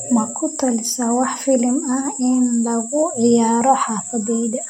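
Speech recording with no technical faults found anywhere in the audio.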